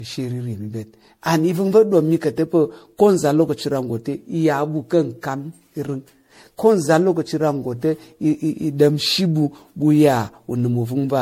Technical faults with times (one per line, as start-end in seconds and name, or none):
0.00-11.22 generation loss